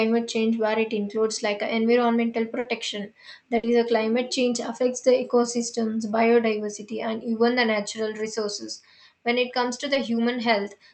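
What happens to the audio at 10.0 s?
Just after "it comes to", from 9.93 to 9.97 s, there is a short concealed packet loss. About 20 ms of audio never arrived, roughly one call packet's worth, and the receiver extrapolated the previous sound to cover it before crossfading back. It is heard as a brief smear or wobble. On a spectrogram, the gap is filled with extrapolated content below the call path's 8 kHz ceiling.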